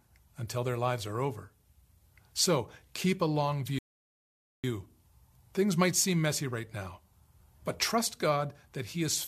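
At 3.79 s, right after "keep a long", the speech halts in a rebuffering stall: playback ran dry of downloaded audio and waited for more, leaving silence until 4.64 s. What separates it from a dropout is that the sentence picks up exactly where it stopped, with nothing missing. The gap adds about 0.85 s to the timeline instead of skipping any of the speech.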